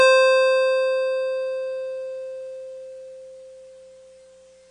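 From start to finish the music is band-limited, with nothing above about 9.8 kHz, and sustained tones warble and sound fizzy while transients sound smeared. The likely cause is AAC compression at a low bitrate, consistent with roughly 32 kbps AAC-LC, lowering the cut-off.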